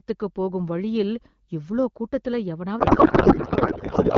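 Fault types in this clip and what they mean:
codec payload misread: octet-aligned AMR frames decoded as bandwidth-efficient, so from 2.79 s, after "போகும் வழியில் இவ்ளோ கூட்டத்துல", speech becomes garbled noise and warble.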